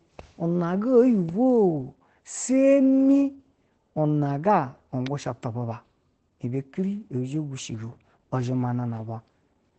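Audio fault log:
Throughout, Opus voice compression: the speech is coded with the SILK linear-prediction layer at a wideband setting, so nothing is heard above about 8.7 kHz and sibilants lose their top edge. The excitation is quantised coarsely, leaving a plainly audible hoarse, slightly robotic texture. That damage points to a low bitrate of around 12 kbps, coded in 20 ms frames.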